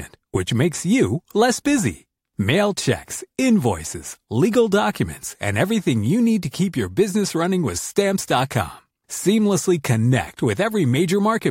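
No technical faults are audible.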